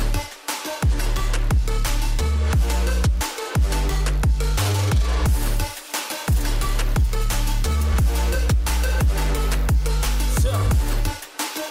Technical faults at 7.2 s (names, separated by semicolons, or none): none